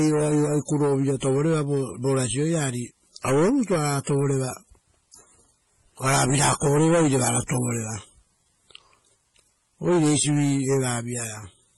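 From start to finish the speech carries a gritty, grainy edge that shifts with the level and gets rough in the quiet tails. That's low bit depth without dither, likely an 8-bit rounding with no dither, so the error tracks the signal, sitting around 45 dB below it.

Layered on top, throughout, is a smeary, swirly codec texture with nothing above 12.6 kHz. It sounds like transcoding between lossy codecs, likely a 32 kbit/s MP3 re-encoded as HE-AAC, with the second codec wasting bits on the first one's artefacts.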